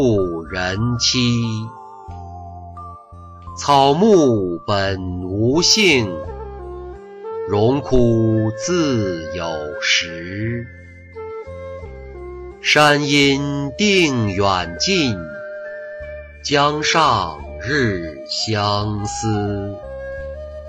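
At 16.47 s the adaptive stream drops to a lower bitrate without a gap. Treble above 15.1 kHz vanishes, which fits a switch to a low-rate HE-AAC stream.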